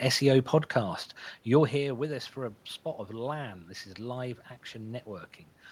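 There are no technical faults to describe in time order; the background room noise and the level shifts around 1.5 s and 5.5 s, where the talker moves relative to the microphone, come from the recording itself.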